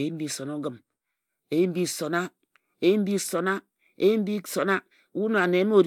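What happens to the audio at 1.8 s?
Nothing goes wrong at 1.8 s; the speech there plays through intact, with no dropout, click or distortion.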